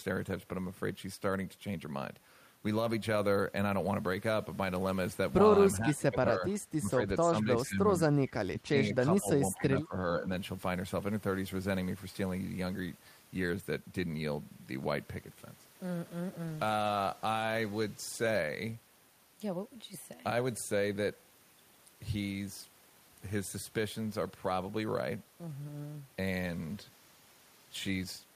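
From 5.79 to 7.89 s the speech dips in level in pieces, about 1.5 s of that span pulled down, by up to roughly 15 dB at the deepest. This is speech suppressed in double talk, likely because the echo canceller heard the far side on the loudspeaker at the same moment as its own talker, could not tell them apart, and turned its own talker down along with the echo.

Inside that stretch, from 7.64 to 7.69 s, a short scrap of a second voice surfaces, about 25 dB below the main speech and trailing it by 448 ms. This is an echo leak: the loudspeaker side's canceller likely failed to remove all of what its microphone picked up, so a delayed copy of the voice it played was sent back.

The suppression returns three more times: 8.47 to 9.28 s, with about half a second affected and a drop of roughly 20 dB; 9.55 to 9.96 s, with about 0.4 s affected and a drop of roughly 15 dB; and 10.14 to 10.28 s, where the dip is shallower, roughly 5 dB.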